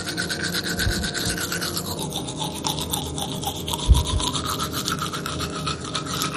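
From the start to 1.97 s the audio runs at the wrong speed, about 1.14 times too fast and roughly two semitones sharp, likely from playback against a mismatched clock. Throughout, there's a dull, gurgling, granular texture with nothing above 15.2 kHz, which points to heavy MP2 compression at a low rate like 56 kbps, likely starving the upper sub-bands.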